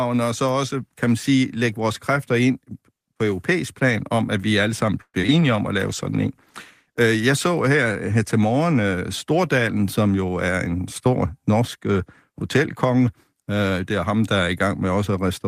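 Speech recording with five network-related faults clustered around the middle. Right after "at vi alle sammen", from 5.01 to 5.16 s, the sound stalls: the last sound is stretched into a fading buzz or hiss with about 60 ms of silence, then resumes where it stopped. This is likely a call audio freeze, inserting roughly 124 ms of delay but losing nothing. Just after, at 5.22–5.25 s and 5.27–5.30 s, come two brief smears, each a short concealed packet loss where about 20 ms of real audio is missing and patched over, unlike the freeze, which removes nothing. From 5.89 to 7.09 s, ending before "jeg så her her", a call bitrate drop from 32 to 18 kbps makes the sound rough and dull for over a second rather than a momentary glitch. From 10.00 to 11.27 s, a jitter buffer speed-up plays the audio about 10% faster with the pitch unchanged, trimming roughly 150 ms so the delivery sounds hurried rather than higher in pitch.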